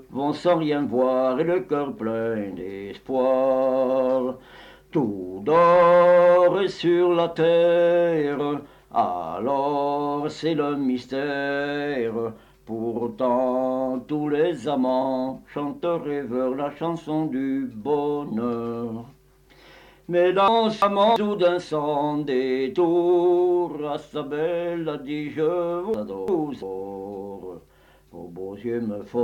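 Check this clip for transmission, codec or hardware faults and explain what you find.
Two chunks out of order, at 20.48–21.16 s and 25.94–26.62 s. In each, a 341 ms block arrived one chunk late and plays after its successor. Nothing is missing, but the sound jumps back and forth, briefly jumbled, with three hard joins.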